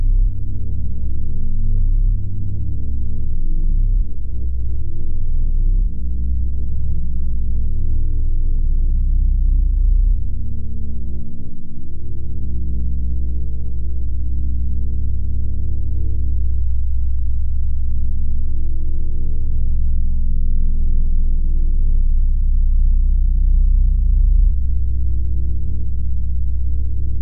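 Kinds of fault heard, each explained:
No kinds of fault are heard in this audio.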